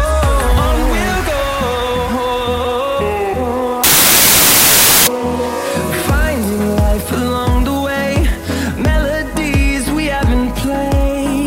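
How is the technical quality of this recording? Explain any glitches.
One glitch stands out. From 3.84 to 5.07 s the sound is replaced by loud, harsh broadband noise, the mark of samples built from the wrong bytes. The reader assembled each sample's bytes wrongly for that stretch, so the rapidly changing low-order bits landed in the high-order positions and dominate every value.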